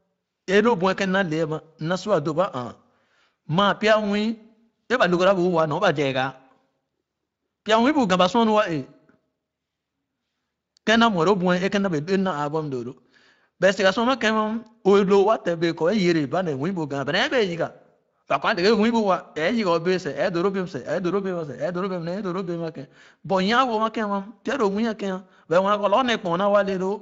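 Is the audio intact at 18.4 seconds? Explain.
Yes, the speech is intact at 18.4 seconds, with no dropout, click, glitch or other fault at that point.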